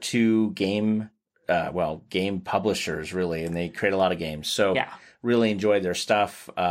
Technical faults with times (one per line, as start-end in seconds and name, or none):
4.00 dropped samples
5.49 dropped samples